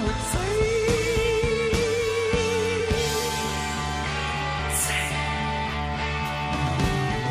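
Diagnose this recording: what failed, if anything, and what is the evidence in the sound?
The codec stage failed: compressed frames skipped. At 2.79 s the sound jumps ahead about 50 ms. At 4.58 s it jumps about 100 ms. Both gaps fit whole 23.2 ms frames, roughly two then four.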